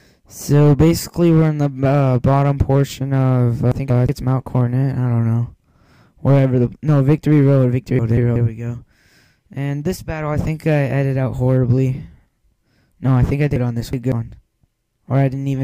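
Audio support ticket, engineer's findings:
Chunks out of order at 3.72–4.09 s, 7.99–8.36 s and 13.56–14.12 s. Jumbled passage. About 186 ms chunks played late, one chunk late in the first two and two in the last. Nothing lost. Buffer or write queue ordering.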